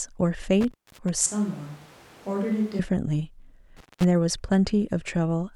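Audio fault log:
0.61–1.09 s and 3.77–4.04 s, intermittent contact: the speech cuts out for about 270 ms and then 205 ms, with crackle at each edge and faint hiss in the gaps. That is a loose connection briefly opening, unlike a clean digital dropout, which leaves silence.
1.26–2.79 s, switch to a distant microphone: the speech suddenly turns roomy and hollow, loses bass and drops by about 10 dB, with room noise about 25 dB below it. This is likely a fallback to a farther microphone. Unlike a dropout, the speech continues throughout.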